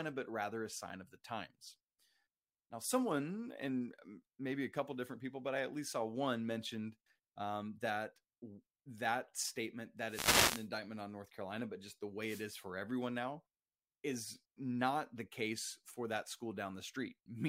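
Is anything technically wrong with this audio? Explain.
Yes. At 10.06 to 10.69 s and again at 12.24 to 12.46 s, the speech has a wireless microphone noise hit. The analogue FM radio link from the microphone momentarily loses strength as reflected copies of the signal cancel the direct one, so the receiver's own noise rises. It is heard as a swish of static over the voice, lasting about 0.6 s the first time and about 0.2 s the second.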